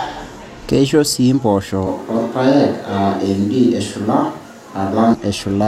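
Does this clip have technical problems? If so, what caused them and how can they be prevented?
Yes. Right after "sii mpoosho", at 1.87 s, the sound suddenly goes roomy and hollow with thinner bass, then snaps back at 5.14 s. Level barely changes, and room noise sits roughly 35 dB down. That's likely a switch to a distant microphone after the close mic dropped out. Check the close mic's cable and battery, and monitor it throughout the take.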